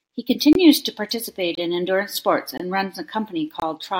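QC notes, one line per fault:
0.53–0.55 s, 1.55–1.58 s, 2.58–2.60 s, 3.60–3.62 s: gap between chunks. The speech stops for about 23 ms at each of these points. The holes recur every 1.0 s of audio plus the gap, which fits fixed one-second chunks joined with silence between them. Unlike a dropout, nothing is missing. The speech resumes exactly where it stopped, only delayed, so the pauses are heard as short holes at regular intervals.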